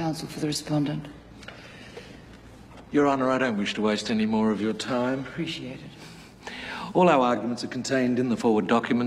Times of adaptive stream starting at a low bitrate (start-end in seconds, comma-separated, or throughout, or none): 0.00-6.00